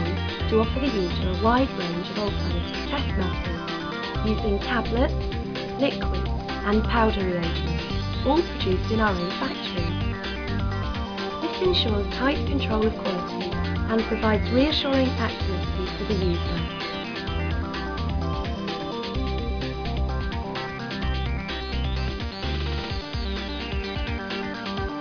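No dropouts, glitches, level jumps or other faults are audible anywhere in the recording.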